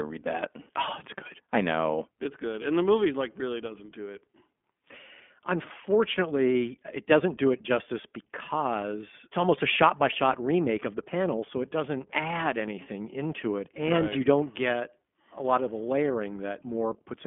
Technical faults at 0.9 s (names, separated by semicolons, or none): iLBC codec